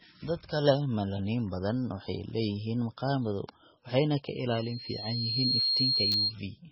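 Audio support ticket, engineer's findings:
Throughout: dull, watery sound with swirling artefacts and nothing above 5.6 kHz. Likely heavy MP3 compression, fitting a very low bitrate around 16 kbps, with bandwidth cut and weak lines dropped.

4.50 to 6.35 s: loudspeaker feedback squeal, a 4.2 kHz tone swelling over roughly a second to about 5 dB above the signal. Mic-to-speaker loop gain exceeds unity at that frequency.

6.12 to 6.14 s: chunks out of order. Brief jumbled moment, one 10 ms block played a chunk late, leaving hard joins at the reordered boundaries.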